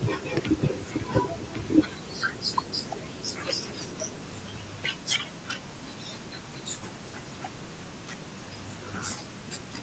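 No faults found in this speech recording; it carries the normal call microphone processing, with the lowest bass taken out by the high-pass filter and nothing above 8 kHz.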